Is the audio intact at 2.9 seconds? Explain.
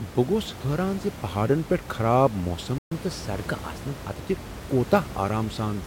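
No. A playback stall runs from 2.78 to 2.92 s, right after "ز پہاڈن پیٹھ خراب". The speech cuts off mid-flow and the output goes silent for about 0.13 s before resuming. That gap of dead air, with nothing playing, is most likely the player running out of buffered data or its output thread being briefly blocked, so it had nothing to send until it recovered.

From 2.92 to 4.22 s a catch-up at higher speed follows. To win back the lost time, the player resamples its backlog and plays it 1.1 times faster. Because resampling moves speed and pitch together, the speech sounds slightly hurried and about one and a half semitones higher for those 1.3 seconds, then drops back to normal speed and pitch.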